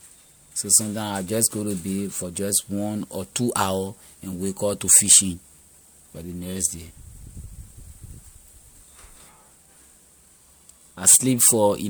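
From start to finish the speech carries generation loss: a swirling, hollow smear, with consonant onsets softened and blurred. The sound points to a lossy codec, likely MP3 at something like 96 kbit/s, applied about three times, each pass re-quantising on a shifted frame grid so the damage compounds. On a spectrogram, content stops near 20.1 kHz, and below that shows flickering holes and smeared energy. In the waveform, transients look rounded rather than sharp.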